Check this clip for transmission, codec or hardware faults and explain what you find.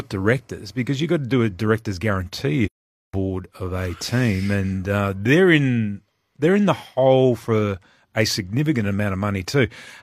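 One fault is present in this speech clip. From 2.66 to 3.14 s, AAC frame loss with muting: the decoder zeroed the missing frames' spectrum, leaving a soft-faded silent hole of about 0.47 s, which fits roughly eleven lost frames.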